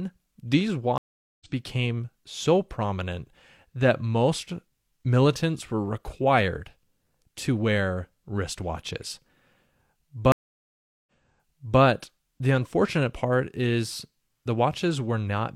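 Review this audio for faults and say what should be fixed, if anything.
Stream reconnect at 0.98 to 1.47 s and 10.32 to 11.81 s: each time the connection dropped and the player restarted its decoder mid-stream. The first gap is 425 ms of silence, and the speech resumes at "became so prominent that" roughly 300 ms further on, so material is skipped. The second gap is 745 ms, and playback resumes 743 ms earlier, before "the unfortunate part is", so the server's resent burst repeats audio. To prevent this, buffer enough to ride out brief drops and resume from the exact position lost.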